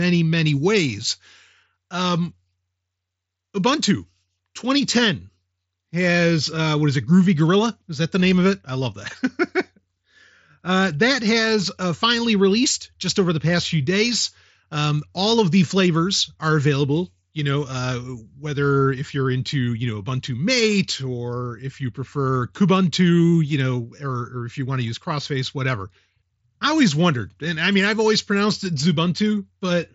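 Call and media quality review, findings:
No faults found in this speech.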